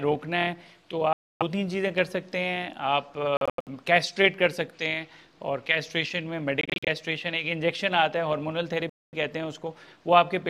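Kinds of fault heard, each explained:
Bluetooth dropout: at 1.13 to 1.43 s, 3.37 to 3.69 s, 6.61 to 6.89 s and 8.90 to 9.14 s the sound cuts to silence, solidly for about 0.28 s and 0.23 s in the first and last, and as scattered gaps in the middle two, the longest 85 ms and 43 ms. The likely cause is audio packets arriving too late for the headphones and being discarded, so the sound resumes further along, as if it had kept playing.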